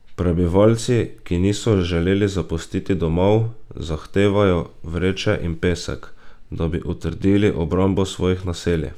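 Nothing technical to flag in this bit of speech; there's no fault here to point at.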